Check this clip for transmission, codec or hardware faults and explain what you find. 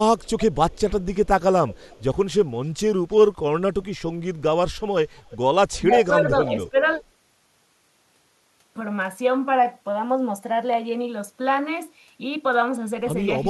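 There are two problems here, both from the echo canceller on the far end of a call: echo leak and speech suppressed in double talk.

The echo leak shows up at 0.18–1.27 s, 1.68–2.03 s, 3.11–3.16 s, 5.16–5.37 s, 5.72–5.97 s and 6.47–7.04 s. Each time there's a faint copy of the speech trailing about 333 to 336 ms behind, sitting roughly 20 to 40 dB under the main signal. It's loudest in the later bursts. The likely cause is a loudspeaker at the other end feeding back into its mic, with the canceller not removing all of it.

Speech suppressed in double talk happens between 5.78 and 6.76 s, right where the echo bursts overlap. The speech dips in pieces, by around 15 dB at the deepest, for roughly a third of a second in total. What's likely happening is that the canceller couldn't separate the talker from the returning echo while both were active, so it turned both down together.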